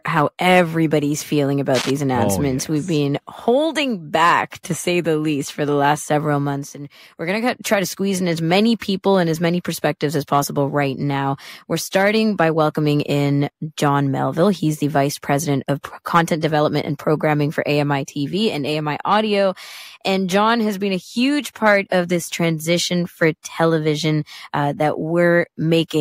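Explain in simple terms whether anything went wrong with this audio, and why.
A worn cable or plug was likely jiggled, making its electrical contact flicker rapidly. That produced cable scratch noise, a short burst of fairly loud scratchy rustling from 1.74 to 1.90 seconds, right after "how everybody's feeling" and just before "oh announcements".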